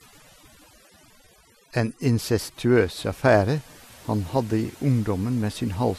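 From start to finish the speech has overdone noise removal: the denoiser clamps bands near its noise estimate, leaving near-silent gaps with twinkling specks. Running the whole way through there's also a dull, gurgly graininess with upper bands flickering out, likely MP2 compression starved of bits, which fits something around 80 kbps.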